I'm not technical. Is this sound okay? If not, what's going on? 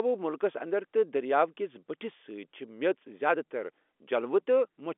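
Yes, nothing is wrong with this recording.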